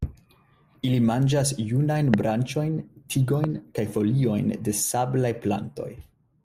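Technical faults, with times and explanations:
2.14–2.16 s and 3.44–3.46 s, loud pop: a single sharp pop, about 20 dB then about 15 dB above the speech, likely a voltage spike from a switch or static.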